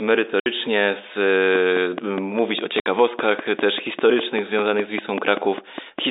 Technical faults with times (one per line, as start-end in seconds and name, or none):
0.40-0.46 packet loss filled with silence
1.55-6.00 train of clicks
2.80-2.86 packet loss filled with silence